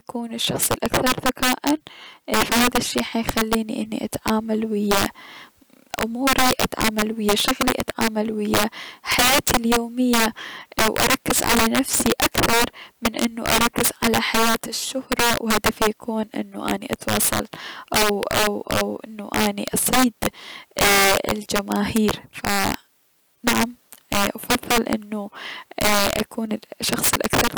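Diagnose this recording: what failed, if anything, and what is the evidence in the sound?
Violent cracks burst from the loudest speech peaks throughout: integer overflow in sample-format conversion, with gain about 11 dB too hot wrapping a few percent of samples to the opposite sign.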